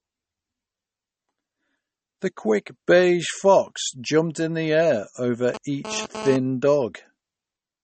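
Throughout this speech clip the sound is watery and swirly, with a metallic, chirping edge on the s sounds and softened consonant attacks, and nothing at all is heard above 8.4 kHz. The likely cause is MP3 compression at a low bitrate, around 32 kbps. Short of bits, the encoder chops off the treble at a fixed point and drops quieter frequency detail that then flickers in and out from frame to frame. From 5.54 s to 6.36 s a hard, raspy buzz cuts in, about 10 dB below the speech, with a 217 Hz fundamental and a dense stack of harmonics that has nothing to do with the speech itself. This is GSM phone buzz. A nearby 2G phone transmits in bursts at that rate, and the audio circuit rectifies the radio pulses into sound. Because the phone is transferring data rather than holding a call, the buzz arrives as this short interruption rather than a constant drone.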